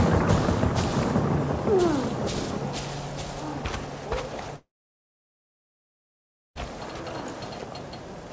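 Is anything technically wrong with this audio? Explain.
Yes. From 4.56 to 6.57 s there is what is likely a long network dropout: packets stopped arriving, so concealment briefly stretched the last sound into a fading buzz or hiss, leaving about 1.9 s of near silence before audio resumes with that stretch lost. The band limit at 8 kHz fits the G.722 codec on the call path.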